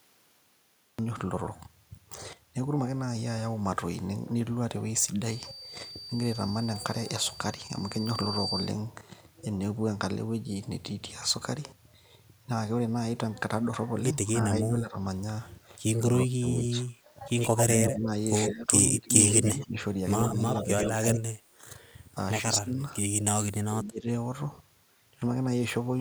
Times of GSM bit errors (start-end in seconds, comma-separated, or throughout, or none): none